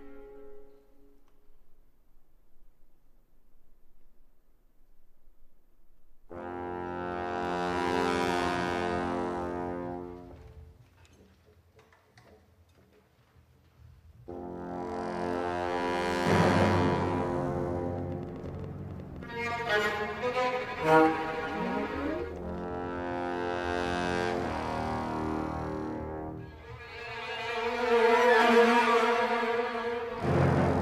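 From 17.99 s to 22.76 s a train of clicks sits over the sound: around forty same-shaped pulses at 8.4 per second, unevenly spaced, roughly as loud as the sound itself. They tick through pauses too, likely from electrical interference or a faulty connection or power supply.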